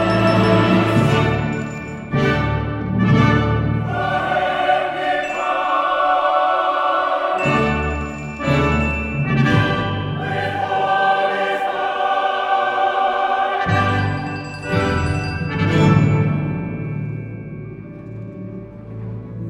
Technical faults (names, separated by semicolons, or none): none